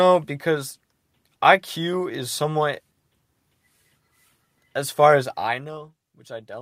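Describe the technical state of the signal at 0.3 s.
At 0.3 s the speech signal is intact, with no fault present and the level steady rather than shifting through any fader-style change.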